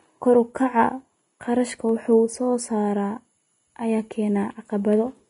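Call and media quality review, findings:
Likely Vorbis compression at low bitrate, throughout the speech. Treble coarsely quantised, band-limited with nothing above 10.6 kHz, fitting an encode near 30 kbps. Result: plainly audible hiss and graininess where high-frequency detail becomes noise, roughened tones, smeared consonant attacks, dull top end.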